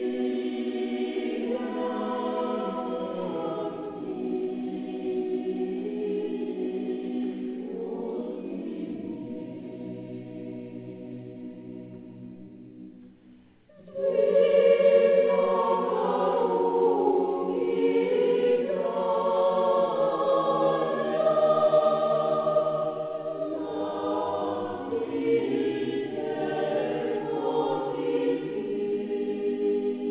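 No technical faults are audible.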